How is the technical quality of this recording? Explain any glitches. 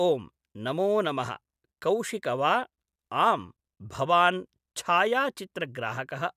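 No glitches can be heard anywhere in the speech. There is nothing to explain.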